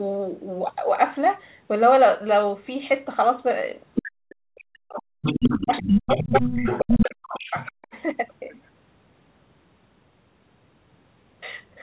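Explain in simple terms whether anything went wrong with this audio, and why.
Other side's voice leaking through: at 3.94 to 4.03 s, 5.22 to 7.11 s, 7.34 to 7.72 s and 7.94 to 8.02 s, a second voice can be heard. In the longest stretch it is about as loud as the main talker. The likely cause is the talker's loudspeaker echo reaching their microphone without being fully removed.

Speech suppressed in double talk: from 4.08 to 5.26 s, 5.63 to 6.67 s and 6.85 to 7.94 s, the main voice dips sharply, at its worst almost to silence, while that second voice is present. With both sides talking at once, the echo canceller likely turned everything down to be safe.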